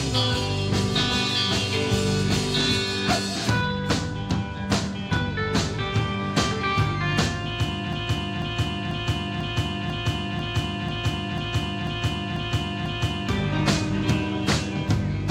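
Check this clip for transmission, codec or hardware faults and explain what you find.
One fault is present: a broken-record loop from 7.93 s to 13.29 s. Somewhere in the chain, the player, encoder or stream likely stalled and kept re-sending the last fragment it held instead of new audio. A piece about 0.49 s long plays back to back 11 times, identical each pass, so the sound stutters rhythmically for over five seconds. Whatever should have played in that span is missing from the clip.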